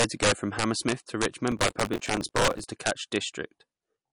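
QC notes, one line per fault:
Throughout, integer overflow: on the loudest peaks the signal is pushed roughly 6 dB past full scale, and instead of limiting, those samples wrap round to the opposite sign. Only a small fraction of samples cross over, but each one snaps as a harsh crack, much sharper than ordinary clipping.
Throughout, MP3 compression: there's nothing above about 10.6 kHz, and the damage is plainly audible. You get a watery, swirly quality, with weak detail fluttering in and out and the sibilants going metallic. That's likely a low-bitrate MP3 encode, around 40 kbps, running short of bits.
1.52 to 2.64 s, processor overload crackle: a gritty tearing rides on the speech and clears just before "to catch". It sounds like the machine kept missing its deadline on small buffers of about 5 ms, about 70 times, replaying stale audio with hard edges each time.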